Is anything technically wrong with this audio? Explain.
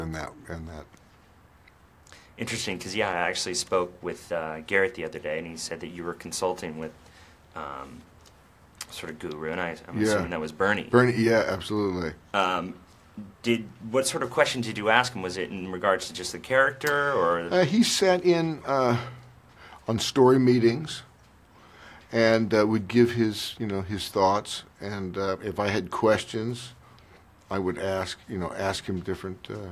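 No, nothing technically wrong can be heard in this audio. Nothing in it points to a problem with how the sound was captured, processed or delivered.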